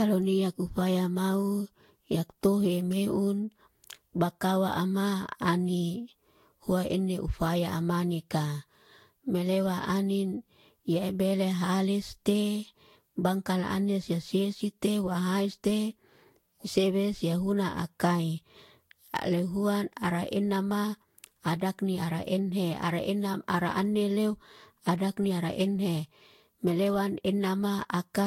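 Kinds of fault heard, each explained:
Generation loss: swirly, hollow, smeared speech with blurred attacks and nothing above 16.7 kHz, likely from around five lossy re-encodes, with a character that fits Vorbis near 64 kbit/s.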